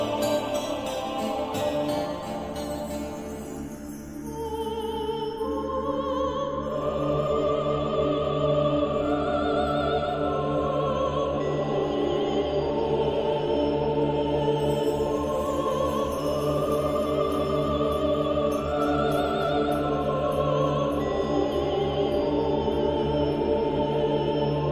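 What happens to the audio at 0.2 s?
Nothing goes wrong at 0.2 s; the audio plays through that moment intact, with no dropout, click or distortion.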